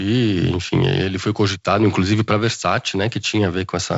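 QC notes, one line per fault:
No faults found; the speech carries the light upper-band hiss and slightly grainy lower band of G.722 wideband telephone coding, which fits the 48 kbit/s mode, with nothing above 7.7 kHz.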